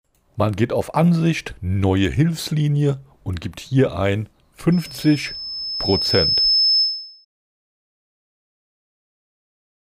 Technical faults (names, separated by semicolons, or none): loudspeaker feedback squeal